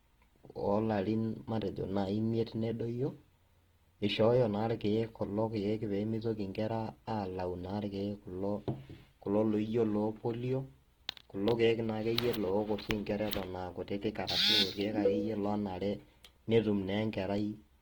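Throughout the speech, Opus compression is audible: the tone sounds grainy and rough, with noise-like texture filling bands where detail was lost, though the band still extends to about 20.2 kHz. This likely comes from music-mode encoding at a low bitrate near 16 kbps.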